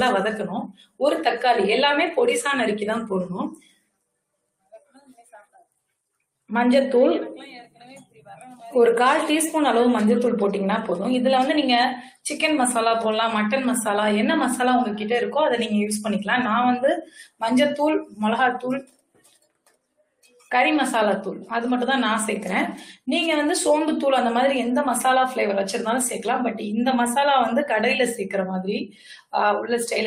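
A speech-tuned noise suppressor has been left running on this sound, and it treats steady, sustained material as noise. Throughout, the level pumps by a few decibels as the suppressor's gain rises and falls: attacks pass while held parts and tails sink, so the waveform envelope looks ragged and a spectrogram shows sustained bands thinning and flickering after each onset. On top of that, the suppressor cuts the sound deeply at 0.66–1.01 s (about 21 dB), 3.5–4.18 s (about 21 dB), 4.34–5.79 s (about 19 dB), 17.02–17.42 s (about 20 dB), 18.05–18.21 s (about 14 dB), 18.81–20.51 s (about 21 dB) and 28.87–29.33 s (about 20 dB). In these stretches steady or decaying sound is pulled down hard and its tail ends early. On a waveform they appear as sudden hollows in the envelope. On a spectrogram they show as dark gaps across sustained partials, with transients still standing.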